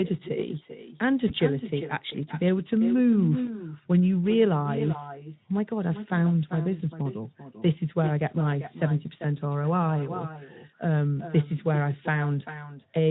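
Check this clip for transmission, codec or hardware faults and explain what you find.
There are two problems here: an echo running through the whole speech clip, and two short dropouts patched over by the decoder.

The echo with no canceller is present from start to finish. The far end's loudspeaker feeds back into its microphone, and nothing strips that out. Your voice returns around 400 ms later, about 11 dB down, as a quieter, thinner shadow trailing every phrase.

The VoIP packet loss concealed by the speech codec happens at 1.27–1.33 s and again at 3.45–3.57 s. Each gap fits a single lost 20 ms frame. The decoder extrapolates from its last pitch and filter state, so the sound is stretched into a buzzy tone or coloured noise that fades, then takes a moment to firm up again.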